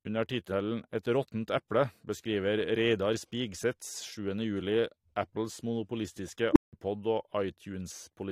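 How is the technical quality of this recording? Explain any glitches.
The recording has one clear glitch. At 6.52 s a tone of around 300 Hz swells to a loud squeal within about 35 ms and clips, then drops to silence for 170 ms until 6.73 s: an unstable filter whose feedback ran away and overflowed.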